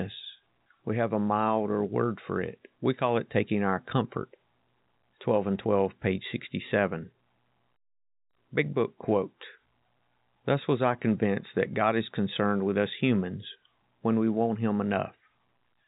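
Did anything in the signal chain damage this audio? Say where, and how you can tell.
No, nothing along the chain has damaged this speech; it just carries the narrow band you'd expect from G.711 telephone coding, with nothing above 3.8 kHz, which is simply how that format sounds.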